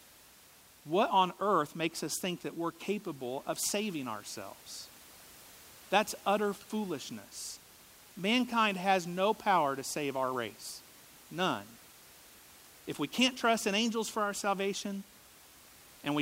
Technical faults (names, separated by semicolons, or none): none